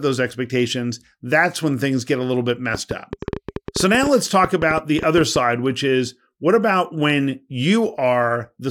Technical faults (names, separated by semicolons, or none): train of clicks